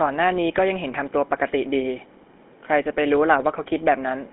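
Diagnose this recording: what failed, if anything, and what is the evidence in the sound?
The fault is at the codec stage: a GSM full-rate codec runs through the whole clip. The speech has a plain buzzy, gravelly roughness. Nothing sounds above 3.8 kHz. The coder rebuilds the voice from a vocal-tract model and coarse pulse excitation, which fits a 13 kbps full-rate coder.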